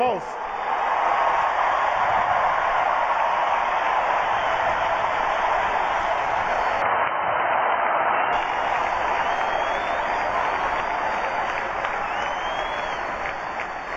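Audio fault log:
6.82–8.33 s, input switched to a poorer device: the sound abruptly turns dull and boxy, with nothing above about 3.1 kHz, then clears again at 8.33 s. There is no gap at either transition and the overall level stays roughly unchanged, but a faint new background noise floor appears, sitting around 45 dB below the signal. The likely cause is the recording input moving briefly to a narrower-band microphone or headset profile with its own noise.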